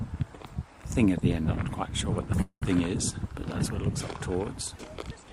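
At 2.41 s the sound stalls into a fading buzz, drops to silence for about 90 ms, then resumes at 2.64 s with nothing lost. This call audio freeze likely came from delayed packets emptying the jitter buffer, which added roughly 200 ms of delay.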